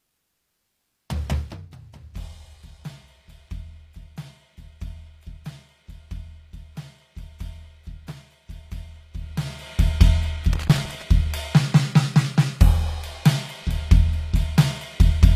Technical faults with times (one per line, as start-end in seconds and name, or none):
0.00-15.36 HE-AAC compression
1.34-1.70 zipper noise
8.07-8.18 loose connector crackle
10.53-11.02 loose connector crackle